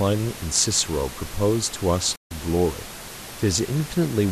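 At 2.15 to 2.31 s, a digital broadcast dropout: the receiver stopped getting good frames and muted, so the speech fades out within 8 ms, leaving a silent gap.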